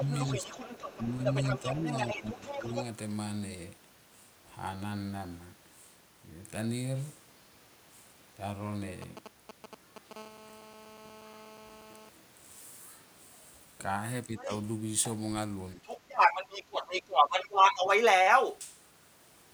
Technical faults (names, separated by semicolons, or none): other side's voice leaking through; speech suppressed in double talk